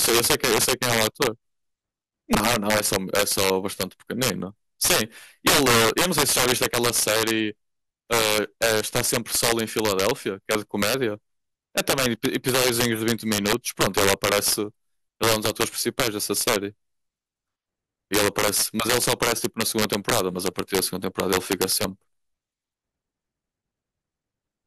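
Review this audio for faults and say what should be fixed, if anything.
Integer overflow runs throughout the speech: the signal is pushed about 9 dB past full scale, so roughly one to two percent of samples exceed the integer limit and wrap to the opposite sign, producing violent cracks on loud peaks, far harsher than clipping. Use saturating arithmetic or a limiter before integer conversion so overloads are clamped instead of wrapping.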